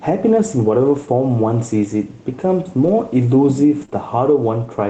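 Gain pumping runs through the whole speech clip, with the gain swinging by roughly 5 dB, likely from excessive input gain driving a fast limiter. A lost packet rebuilt from error correction occurs at 2.83–2.89 s and again at 3.81–3.83 s, where the decoder played low-bitrate redundant copies instead of leaving gaps, so those 40 ms and 20 ms stretches sound rougher and noisier within the 8 kHz Opus band. Short concealed packet loss follows at 3.85–3.90 s and 3.90–3.93 s, where the receiver extended the preceding sound to cover roughly 20 ms holes, leaving a brief smear before blending back in.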